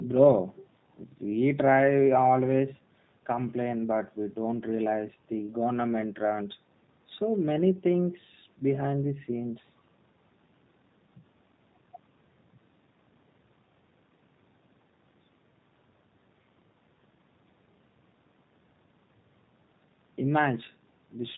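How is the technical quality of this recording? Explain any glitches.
Technical quality is limited by one fault that runs through the whole recording: G.729 codec coding. Throughout, the speech is bandlimited to 4 kHz and sounds rough and synthetic, as each 10 ms frame is rebuilt from a vocal tract filter, a pitch predictor and sparse pulses, which fits an 8 kbit/s stream. The call's low-cut on the lowest bass is normal.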